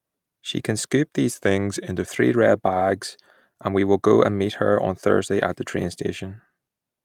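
From 1.31 s to 2.06 s the speech suddenly sags: it runs about 5.7 percent slower and drops roughly 102 cents, close to a full semitone flat, then returns to normal speed and pitch. This is a drift correction step, likely from clock-matching software that briefly lowered the playback rate in a single jump to let its buffer refill, shifting speed and pitch together for those three-quarters of a second.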